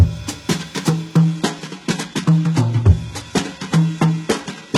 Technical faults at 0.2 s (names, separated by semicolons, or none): none